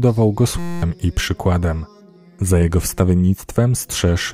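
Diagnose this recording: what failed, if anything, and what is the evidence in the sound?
System hang loop, driver/buffer stage: 0.59 to 0.82 s, one 5.8 ms slice cycles into a steady 172 Hz buzz, fitting a 256-sample buffer.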